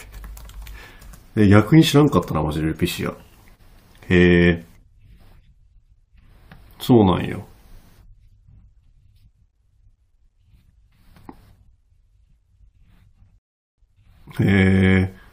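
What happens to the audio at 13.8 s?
At 13.78 s the speech picks up again after a gap of dead silence that began at 13.38 s, resuming at exactly the point where it broke off. This is a rebuffering stall: playback ran out of downloaded audio and waited for more, so nothing is skipped, but about 0.40 s of time is added.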